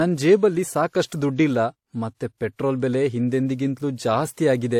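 Throughout, the speech likely went through transcoding between lossy codecs, AAC then WMA. Both codecs' artefacts are heard together, with nothing above 18.6 kHz.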